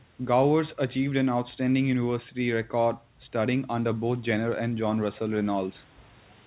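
No technical faults are audible.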